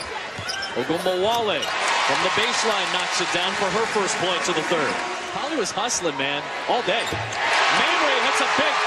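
No technical faults can be heard anywhere in this audio. Nothing in the sound points to a dropout, distortion or any other break in the chain.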